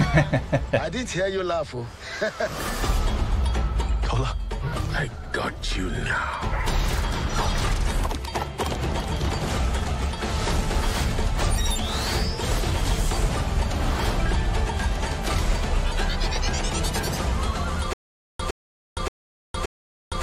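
Stutter with silent gaps from 17.93 s to the end: the same 113 ms burst returns every 574 ms amid digital silence, likely a stalled stream retrying.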